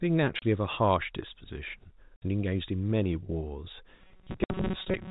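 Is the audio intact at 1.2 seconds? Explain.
Yes, the speech is intact at 1.2 seconds, with nothing breaking into it at that moment.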